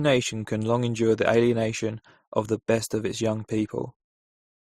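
Throughout the speech there is nothing above about 15.9 kHz, and two distinct flavours of coding damage sit on top of each other and are heard together. This is likely transcoding between lossy codecs, which fits an MP3 encode at around 42 kbit/s later re-encoded as Opus at around 32 kbit/s. The second encoder spent its limited bits reproducing the first one's artefacts while adding its own, and the lowest band limit in the chain carried through.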